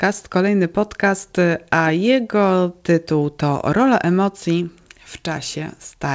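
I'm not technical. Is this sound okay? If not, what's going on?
Yes, there's nothing wrong with it. It came through an internet call using the G.722 codec, which is why nothing above about 8 kHz can be heard, so it lacks the very top end of the sound.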